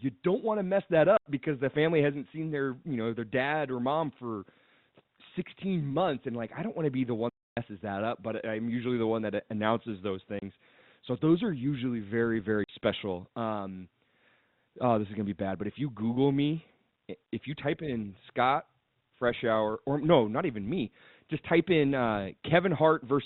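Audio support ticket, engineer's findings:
Packet loss filled with silence at 1.17 s (90 ms gap), 10.39 s (30 ms) and 12.64 s (50 ms). Hard-edged dropouts, every gap a clean multiple of 10 ms, which fits 10 ms packets going missing on the network. The receiver just plays silence instead of concealing. Check jitter buffer and PLC settings on the receive side.

Playback stall at 7.29 s, dead air for about 280 ms mid-flow, then the audio picks up again. Too long and uneven to be packet-sized holes. Likely the player starving for data or its audio thread getting blocked. Worth pulling thread and buffer timing logs.

The G.711 mu-law telephone band, topping out around 4 kHz, is present throughout.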